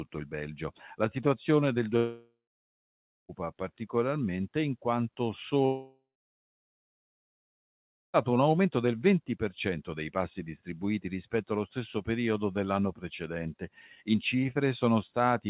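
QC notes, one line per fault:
1.97–3.32 s, long network dropout: after "situazione del" the sound smears into a fading buzz, then about 0.9 s of silence until "particolarmente in quanto". About 1.3 s is missing, likely because packets stopped arriving and the receiver could only stretch the last audio.
5.66–8.17 s, long network dropout: after "particolarmente in quanto" a brief fading buzz gives way to about 2.1 s of silence. About 2.5 s is missing, likely for the same packet loss.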